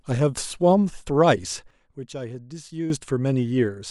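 At 1.71 s the speech level drops abruptly by about 12 dB, and the background noise falls with it, so the whole signal steps down at a single instant rather than fading. It stays at that reduced level until 2.90 s, then returns just as suddenly. This is a sudden gain jump, most likely a digital gain setting applied from one sample to the next with no ramp.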